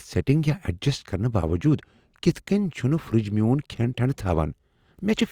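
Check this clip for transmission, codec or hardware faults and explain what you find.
One codec fault is audible, a pre-echo in the speech just after "یا ایڈجسٹ کرنہٕ باوجود" and before "کٔنۍ چھٗنہٕ فرٛج میون", from 2.32 to 2.35 s. The transform codec spread quantisation noise sized for a sharp onset across its whole block, so a 31 ms hiss leads the attack, which sounds softened. Unlike a click or dropout, the noise comes before the attack rather than at or after it.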